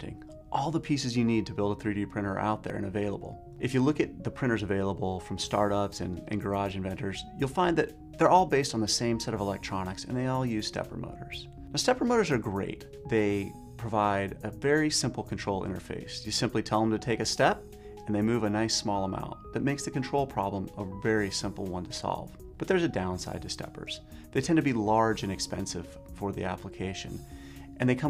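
Sample clock jitter runs the whole way through: the converter's clock wobbles by under a microsecond, adding a slope-dependent hiss roughly 45 dB down that swells on loud, bright passages.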